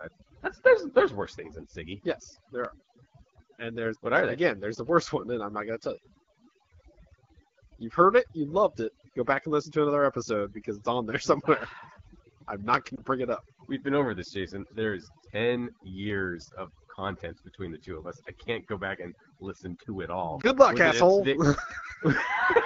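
From start to finish, overdone noise removal is at work. The noise reduction was pushed too hard. Any frequency band near its noise estimate is driven far down or shut off entirely. Quiet parts of the speech are cut along with the noise. The background sinks low, breaking up into twinkling specks. The wideband phone coding itself adds only light damage.

At 12.95 to 13.02 s comes the first case of lost AMR speech frames. The gap fits a single lost 20 ms frame. The decoder fills it by repeating the last good pitch and vocal tract settings at lower gain. It is heard as a brief dip or warble. The same thing happens again at 20.41 to 20.50 s. Each time, the voice returns a little weak or rough for a moment.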